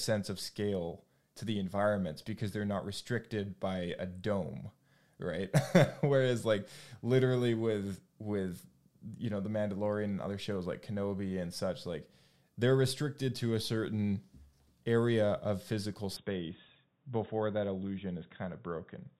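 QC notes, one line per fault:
16.16–19.20 s, input switched to a poorer device: the speech suddenly turns dull and boxy, with nothing above 3.8 kHz, a faint new background noise well below the signal, and no gap or level jump. The recording likely moved to a narrower-band microphone.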